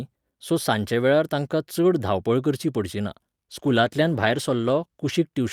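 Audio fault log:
3.55–5.23 s, call bitrate drop: the speech goes rough and watery as the encoder is pushed from 64 kbps down to 18 kbps, holding that floor for about 1.61 s. With far fewer bits per frame, the codec quantises the spectrum much more coarsely, smearing detail, and at this low rate it also trims the upper band, leaving sibilants and consonant edges duller until the bitrate climbs back by 5.23 s.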